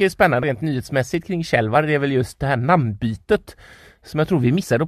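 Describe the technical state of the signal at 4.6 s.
At 4.62 s compressed frames are skipped: about three 23.2 ms frames never decode, so the speech jumps ahead roughly 70 ms, visible as a spectrogram discontinuity.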